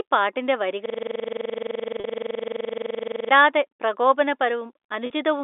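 At 0.86 s the speech locks into a system hang loop that lasts until 3.31 s. The computer or driver stalled, but the sound hardware kept replaying one ring buffer. Each repeat is 42.67 ms, which fits a 2048-sample buffer. The same fragment cycles dozens of times at 23.4 Hz. That rate is slow enough to sound like a hard, machine-gun stutter rather than a smooth buzz. The speech only resumes at 3.31 s.

At 2.00 s, inside the stutter, comes packet loss with pitch repetition. About 40 ms of audio went missing, which fits two 20 ms packets. The receiver filled the gap by repeating the last pitch period and fading it. The loss is short, so it sounds like a brief, slightly held buzz. At 5.06 s the same thing happens again. Another 40 ms gap becomes a short, buzzy hold before the speech carries on. Throughout, the telephone band runs from 300 Hz to 3.7 kHz.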